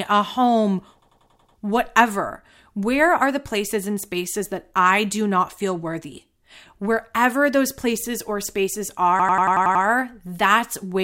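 Right after "a home", from 1.02 to 1.58 s, there's a system hang loop: the system stalled while the audio hardware kept replaying its ring buffer, so one chunk of about 92.9 ms repeats six times. That fits a 4096-sample buffer. At 10.8 Hz it comes across as a rapid machine-gun stutter. It happens again after "those places or spaces", from 9.2 to 9.85 s, with the same chunk length and seven repeats.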